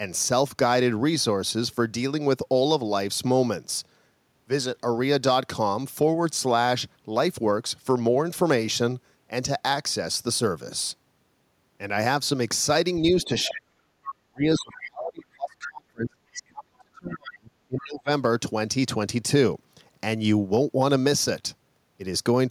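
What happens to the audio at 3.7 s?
Nothing goes wrong at 3.7 s; the speech carries on intact through that moment, with no dropout, click, distortion or other fault to be heard there.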